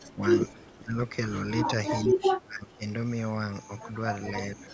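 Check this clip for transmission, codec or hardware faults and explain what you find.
Two kinds of fault turn up in this speech clip: repeated dips in the talker's level, and one brief leaked echo.

Speech suppressed in double talk occurs four times: 0.08 to 0.23 s, 0.73 to 0.97 s, 2.03 to 2.84 s, and 4.51 s to the end. Each time the speech sinks, by about 20 dB in the first two, about 25 dB in the long third stretch, and only about 5 dB at the close. The likely cause is an echo canceller that heard both ends talking at once, could not tell this talker from loudspeaker echo, and attenuated everything.

An echo leak appears from 0.49 to 0.62 s as a faint, delayed ghost of the voice, around 30 dB below the speech and trailing it by 435 ms. This is likely a loudspeaker on one side of the call whose echo canceller failed to remove all of the sound its microphone picked up, so a short scrap of that leftover came back down the line.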